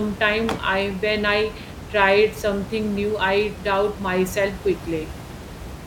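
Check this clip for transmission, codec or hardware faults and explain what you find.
Nothing here points to a problem in the chain; the room noise sitting about 14 dB under the speech is simply part of where it was recorded.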